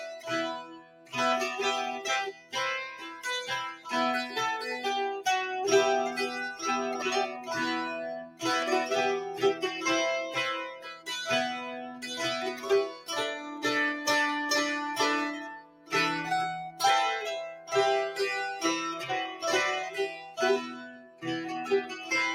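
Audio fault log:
Throughout: noise suppressor applied to music or sounds. A speech-tuned suppressor keeps mistaking steady material and tails for noise, so the level swings by around 10 dB and the sound pumps and thins.
0.0–1.15, 2.32–3.88, 7.39–8.43, 10.72–13.6, 15.36–17.72 and 19.32–22.11 s: sound cut by the noise suppressor. Held or decaying parts sink by about 14 to 16 dB, each time for somewhere between a third of a second and a second and a half, while sharp onsets slip through.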